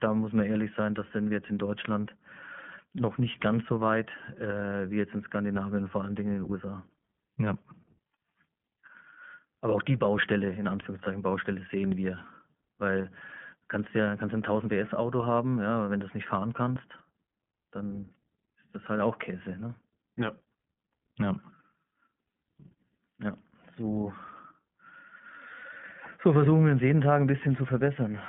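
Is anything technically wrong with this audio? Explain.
Yes, there are two kinds of fault in this speech clip.

iLBC codec, throughout: the whole recording has been through this narrowband VoIP codec, which codes each 20 ms frame independently, which fits its 15.2 kbps mode. The band is limited to about 150 Hz to 3.4 kHz, so the speech sounds plainly rough, slightly synthetic and muffled.

Lost iLBC frames, at 11.04 to 11.08 s, 13.02 to 13.05 s and 25.60 to 25.63 s, the last just before "so versuchen wir uns": each time one 20 ms frame went missing, and the decoder filled the gap by repeating the last pitch cycle blended with noise. Each gap is a brief held, buzzy vowel, and the speech recovers immediately afterwards.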